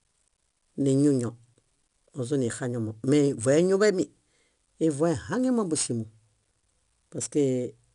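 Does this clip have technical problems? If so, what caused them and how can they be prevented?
Yes. Throughout the clip, 4-bit ADPCM compression codes each sample as a coarse step from a prediction, leaving gritty hiss on every loud syllable and distorted attacks. Nothing exceeds 10.6 kHz, which fits a sample rate near 22 kHz. Keeping a linear PCM source would prevent it.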